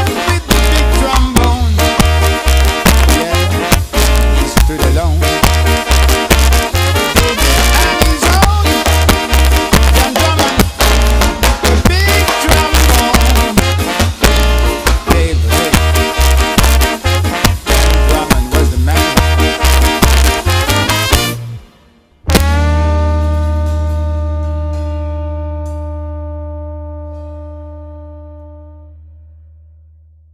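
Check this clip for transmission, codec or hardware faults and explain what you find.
There is one fault: integer overflow, present throughout. The signal runs about 2 dB past the integer limit. Peaks that exceed it wrap to the opposite sign instead of being limited. Less than one percent of samples are affected. Each one gives a violent crack on loud moments, much harsher than clipping.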